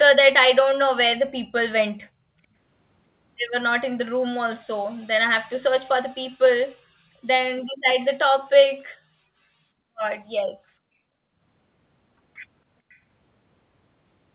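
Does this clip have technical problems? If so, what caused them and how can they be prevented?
Yes. From 12.89 to 12.99 s a very faint copy of the speech surfaces, 445 ms behind the original. This is likely an echo leak: the other side's loudspeaker reached its microphone, and its echo canceller let that sound through. Headphones or stronger echo cancellation on that side would prevent it.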